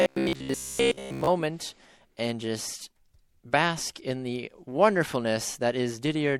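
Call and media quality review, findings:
Robotic sound from repeated short buffers, 0.02 to 1.27 s. Rigid metallic buzz at 66.8 Hz, loosely tracking the speech. Likely cause: starved playout buffer. A 15 ms segment loops in place of missing audio. Most of the stretch repeated, not real.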